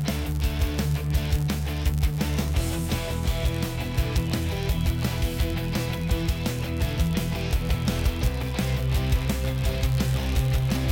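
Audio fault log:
Throughout: block size mismatch (padded). Each short block is zero-filled, and the gaps buzz at 99.6 Hz and slow the audio 0.4% while the timbre stays.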